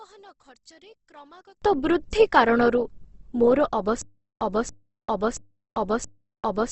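Opus compression runs through the whole clip. Nothing reaches above about 8.1 kHz, and the speech sounds rough and grainy rather than swirly. This likely comes from Opus in its music (CELT) mode, filling starved bands with noise at a rate that fits roughly 16 kbps.

One channel inverted affects 0 to 1.62 s, ending just before "ବୃଦ୍ଧି କାରଣରୁ ମୋର". The centred speech drops by about 30 dB to a faint trace. This is likely because one stereo channel has reversed polarity, so the shared content cancels when the channels are summed to mono.

Stutter with silent gaps starts at 4.02 s, after "ବୃଦ୍ଧି କାରଣରୁ ମୋର", and lasts to the end. A 281 ms burst repeats four times, each followed by 395 ms of digital silence, every 676 ms. The likely cause is a stalled stream replaying its last fragment and then running empty, so the speech that should have followed is lost.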